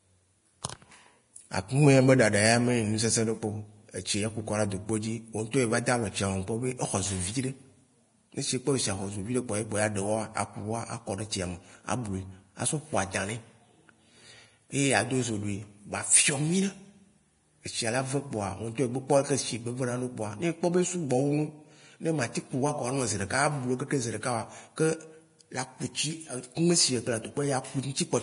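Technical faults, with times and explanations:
Throughout, Vorbis compression: the speech was most likely encoded with Vorbis at a low quality setting, and the heavy damage fits a bitrate near 32 kbps. The encoder discarded everything above 10.6 kHz and quantised the remaining treble so coarsely that its fine detail was replaced by noise of similar energy. As a result, the speech comes across hissy and grainy, tonal parts sound roughened, and consonant onsets are smeared.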